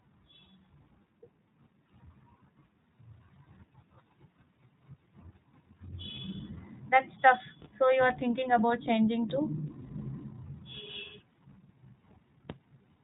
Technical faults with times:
0.00-13.04 iLBC codec

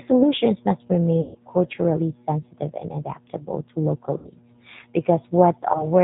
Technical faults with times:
0.00-6.04 G.729 codec
1.21-1.38 VoIP packet loss concealed by the speech codec
4.18-4.28 VoIP packet loss concealed by the speech codec
5.72-5.85 VoIP packet loss concealed by the speech codec

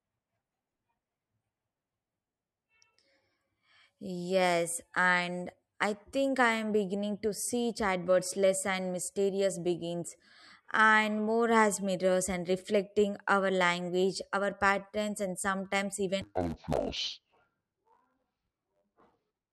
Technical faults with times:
16.21-19.52 interleaved audio read as planar

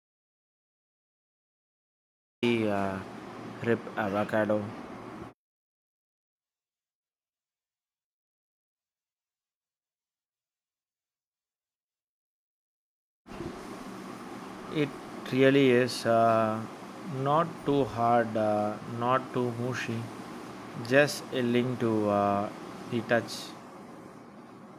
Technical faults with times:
0.00-2.42 audio dropout to silence

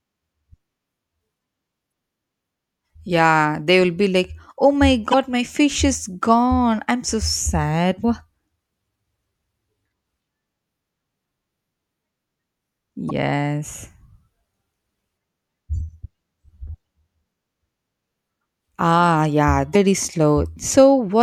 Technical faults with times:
1.89-1.91 damaged data in a compressed stream
5.10-5.14 damaged data in a compressed stream
8.01-8.05 damaged data in a compressed stream
13.09-13.11 damaged data in a compressed stream
19.72-19.76 damaged data in a compressed stream

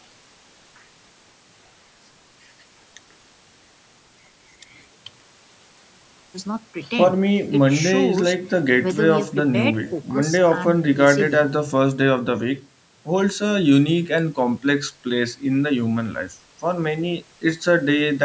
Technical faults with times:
none

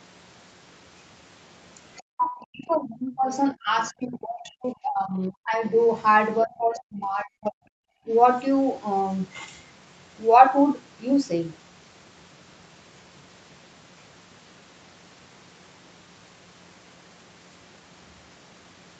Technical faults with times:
1.99-5.73 speech suppressed in double talk
6.43-7.63 speech suppressed in double talk
8.06-8.11 speech suppressed in double talk

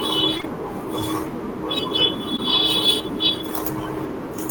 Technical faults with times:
0.37-0.45 short concealed packet loss
2.37-2.40 short concealed packet loss

